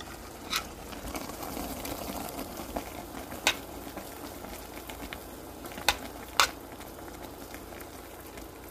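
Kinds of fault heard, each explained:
Low-delay AAC compression: The sound has a rough, grainy texture throughout, and the damage is plainly audible. Nothing is left above 15.6 kHz, so the top end stops abruptly. The likely cause is AAC-ELD, the low-delay codec of video calls. It codes very short frames to keep delay down. At a low bitrate that leaves fine detail coarse. The degree of damage fits a low bitrate of around 32 kbps.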